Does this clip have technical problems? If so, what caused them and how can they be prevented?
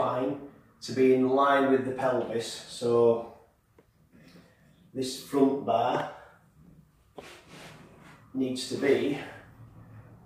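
No, nothing in the recording points to a technical fault, so there is no cause to trace and nothing to prevent.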